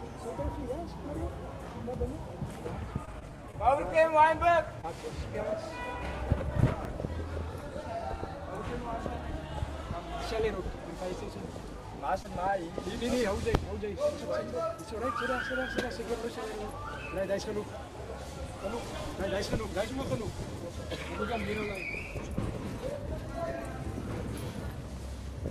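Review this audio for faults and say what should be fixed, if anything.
Repeated packet loss, giving a robotic sound, runs from 3.05 to 3.68 s. Four short holes fall in that stretch, the longest 19 ms. The receiver patched each by continuing the last sound. About 11% of the span is synthetic fill, so it turns choppy. Better network stability or stronger loss protection, such as forward error correction, would prevent it.

Short concealed packet loss occurs at 4.81 to 4.85 s and again at 12.23 to 12.26 s. Each time, 20 ms of audio never arrived. The receiver filled it from the preceding sound, leaving a brief smear or wobble. Packet redundancy or retransmission on a steadier link would prevent these.

A short stall from a late packet follows at 12.50 to 12.54 s. The delay jumped by 20 ms and the jitter buffer ran dry. The last sound was stretched for 20 ms, then playback resumed. Nothing is lost, but a sound is held too long, with a slight buzz or dip. 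A deeper or adaptive jitter buffer would prevent it.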